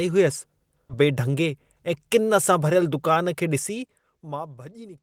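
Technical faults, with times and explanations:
0.89–0.91 s, skip ahead: The sound lurches forward with no gap, so roughly 0.7 s of speech is simply missing and the two sides butt together. A late stretch was discarded, likely on an overflowing jitter buffer, while newer audio was already queued.
1.01–2.30 s, jitter buffer speed-up: Speech here runs hurried, about 109% speed at unchanged pitch. The receiver, holding more audio than its target, repeatedly cut out short pitch-period slices, shedding roughly 150 ms in total to pull the delay back down.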